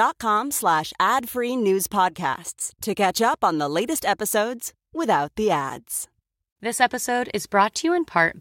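Periodic USB or driver dropouts, 6.79 to 8.29 s: every 0.5 s a blocked driver loses a tiny sliver of speech to silence, heard as regular ticks.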